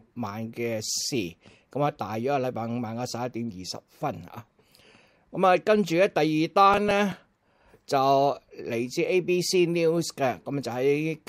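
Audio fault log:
6.74–7.16 s, processor overload crackle: For just under half a second there's a gritty, tearing crackle riding on the sound. The processor couldn't keep up and kept missing its buffer deadlines, and each missed buffer was simply skipped, so the audio jumps forward with a hard edge every time. The tiny gaps fit a buffer of about 3 ms, with something like seven misses close together, which is why it reads as a crackle burst rather than separate clicks.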